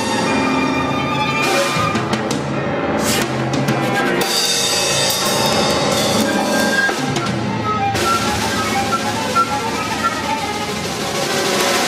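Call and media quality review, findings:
Integer overflow: hard, violent cracks on the loudest peaks at 3.10–3.22 s, 3.69 s, 4.37–4.46 s, 5.46–5.71 s, 6.21 s, 6.60 s and 11.61 s. The signal only pushes about 0 to 1 dB past full scale, but each overshoot wraps straight to the opposite extreme instead of saturating. Probably a fixed-point gain or mix-sum stage missing clamp logic. Worth checking whether saturating arithmetic got dropped there.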